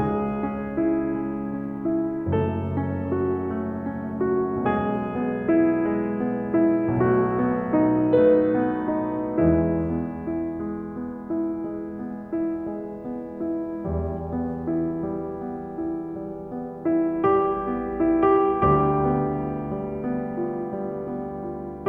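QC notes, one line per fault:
No faults heard anywhere in this music.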